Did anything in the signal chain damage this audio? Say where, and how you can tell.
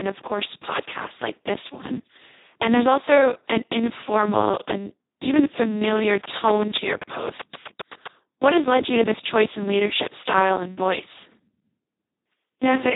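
Yes, at the codec stage, for the whole clip. The speech sounds hoarse, buzzy and strongly robotic, with a noisy grain on every syllable and nothing at all above about 3.8 kHz. That is the Speex codec run at its very lowest quality, which fits a bitrate of roughly 2 kbps. This CELP coder has almost no bits left to describe the excitation, so it behaves nearly like a vocoder, rebuilding the speech from coarse parameters rather than the real waveform.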